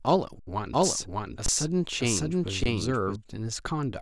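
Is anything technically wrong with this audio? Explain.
Yes. The clip has three underruns with held sample and one stretch of doubled audio track.

The underruns with held sample occur at 0.39 to 0.47 s (about 75 ms), 1.46 to 1.48 s and 2.64 to 2.66 s (about 21 ms each). The output buffer ran empty. The converter held its last value. The waveform goes flat, and the sound simply stops with no real click. No audio was lost. Playback resumes where it paused, so each restart is soft. The two short gaps fit a 512-sample buffer.

The doubled audio track runs from 0.74 to 3.16 s. A second copy of the speech trails the original by about 0.7 s, at roughly the same level. It is full-band, with no decay or room colour. It begins and ends abruptly. A slower capture path likely recorded the audio twice.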